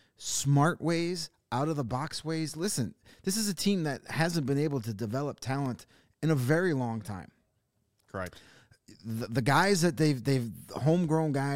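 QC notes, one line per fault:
1.74–2.19 s, CD scratch ticks: after "smart ways out of", four short clicks about seven a second, the longest a few milliseconds. Each is a spot where a scratch wiped out more data than error correction could restore, so the player patched or muted the samples, once per disc revolution.
5.51–5.96 s, CD scratch ticks: between "been able to develop" and "in a very long", four briefer ticks at the same spacing. The scratch returns with each turn of the disc, leaving small concealed gaps.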